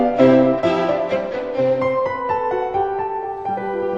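No technical faults can be heard anywhere in the clip. Nothing in the sound points to a problem in how it was recorded, processed or delivered.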